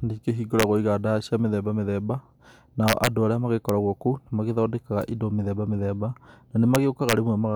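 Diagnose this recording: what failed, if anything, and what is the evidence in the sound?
A fixed-point gain or sample-format conversion stage is wrapping instead of saturating, an integer overflow. Speech peaks pushed about 2 to 3 dB past full scale flip to the opposite extreme of the range rather than flattening at the limit. The result is harsh, violent cracks far sharper than ordinary clipping, heard at 0.60 to 0.63 s, 2.88 to 3.07 s and 6.75 to 7.13 s.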